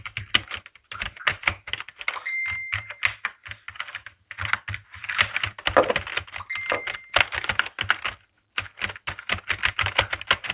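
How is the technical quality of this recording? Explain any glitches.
The recording has no glitches to explain; its technical quality is that of a G.711 call path, with nothing above 4 kHz.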